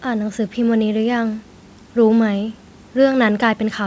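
Nothing stood out on listening to this speech, which carries the usual call-path band limit with no content above 8 kHz.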